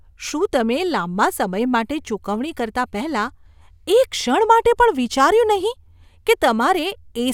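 No audible technical faults.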